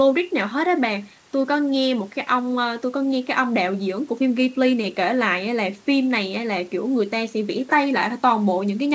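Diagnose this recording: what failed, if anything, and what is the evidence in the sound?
Nothing failed; no fault is audible anywhere.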